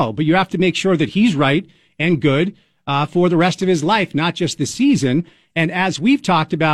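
Nothing goes wrong anywhere in this bit of speech, so there's no technical fault to point to at any moment.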